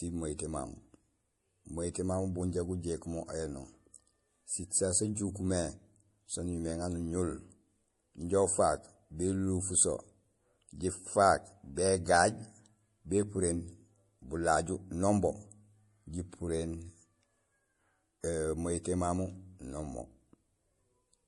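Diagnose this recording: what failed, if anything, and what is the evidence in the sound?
Codec stage: nothing above 11.4 kHz throughout the speech fits a 48 kbit/s MP3 re-encoded at 256 kbit/s. This is likely low-bitrate audio saved at a high bitrate, and the missing band cannot be recovered.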